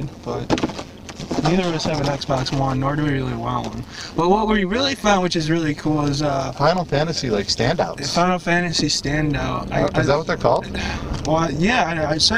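From start to finish, the level pulses rapidly. This is overlap-add ripple. The audio was split into windowed frames and joined back together, but the overlapping windows do not add up to a steady gain. So the level dips and swells once per frame, here at around 150 times a second. The swing is deep, about 11 dB. It comes across as a buzzy, metallic sound over the whole clip, with extra tones around each note rather than a clean tone.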